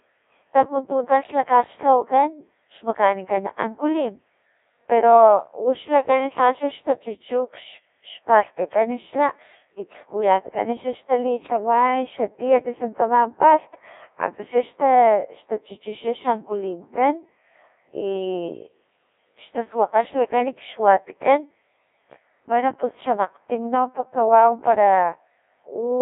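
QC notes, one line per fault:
Throughout, Codec 2 vocoder: the speech comes out robotic and buzzy, with a narrow band running from about 250 Hz to 3.7 kHz and nothing at all above 3.8 kHz. The decoder rebuilds each frame from sine waves driven by pitch, voicing, energy and a coarse envelope, so the original waveform is gone. At a rate consistent with 1.6 kbit/s the damage is heavy. A spectrogram shows smeared, comb-like harmonics and a hard ceiling. The waveform looks regular but no longer matches the source.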